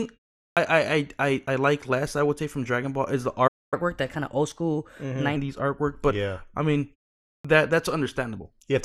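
Right at the start, from 0.52 to 0.57 s, there's a clipped start after a pause. After about 0.42 s of silence, the output device seems slow to wake, so roughly 47 ms goes missing and "I I I like" pops in abruptly.

At 3.47 s, just after "is the", the audio stops dead until 3.74 s. That's a playback stall of about 244 ms, likely from the player running dry or its thread getting blocked.

From 3.74 to 5.36 s there's catch-up at higher speed. The backlog plays at 1.15x, so everything sounds hurried and roughly two semitones sharp before settling back to normal.

The clipped start comes back after "yeah I mean" and a 0.53 s pause. From 7.40 to 7.45 s, about 45 ms of the onset is swallowed as the output wakes up again.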